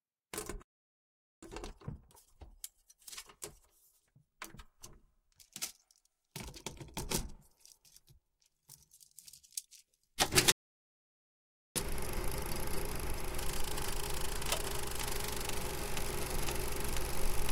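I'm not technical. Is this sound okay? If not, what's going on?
No. The sound cuts out twice, from 0.62 to 1.43 s and from 10.52 to 11.76 s. These are playback stalls, likely the player running short of data or being held up.

After each gap it plays hurried but at normal pitch, 1.1 times speed from 1.43 to 4.43 s and 1.15 times from 11.76 to 14.76 s. This time-compressed catch-up trims tiny pieces to make up lost time.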